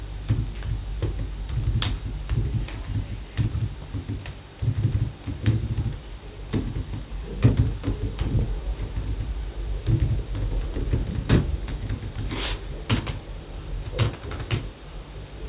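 All the way through, these everyday sounds carry aliasing. The content cuts off hard at 4 kHz, which fits a drop to 8 kHz sampling without a proper low-pass first. Higher material folds back down as gritty, metallic tones roughly 20 dB under the real sound.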